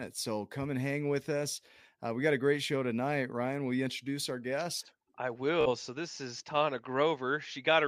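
A short buzzing stutter breaks the speech from 5.61 to 5.69 s, just after "introduce our guest I". This is Bluetooth stutter: a tiny slice replays while data is late, then about 46 ms is skipped, which fits roughly three lost frames.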